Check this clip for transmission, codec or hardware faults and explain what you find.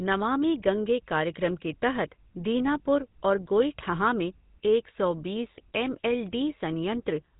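Two faults are present: GSM full-rate coding across the whole clip, and a short burst of GSM bit errors near the end.

Throughout, the speech carries the GSM full-rate codec's buzzy, gravelly roughness, consistent with 13 kbps full-rate coding. The codec rebuilds the voice from a vocal-tract model driven by sparse, regularly spaced pulses. On a spectrogram, energy stops sharply at 4 kHz, with coarse, comb-like harmonic texture below.

From 5.54 to 5.60 s, GSM bit errors cause a brief squawk and gargle. Corrupted filter, pitch or gain values reached the decoder, which fits roughly 1% of bits flipped across a few frames. The spectrogram shows a smeared, distorted block.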